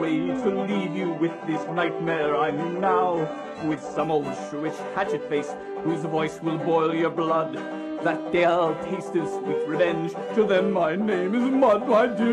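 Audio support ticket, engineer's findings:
0.0–4.0 s: dull, smeared, synthetic-sounding treble, stronger codec artefacts. Clean jump to better quality at 4.0 s, no gap; afterwards nothing above 15.1 kHz. Adaptive stream starting at a low bitrate: player opened on a low rendition, consistent with HE-AAC near 12 kbit/s, then upshifted, consistent with AAC-LC near 96 kbit/s, after measuring throughput.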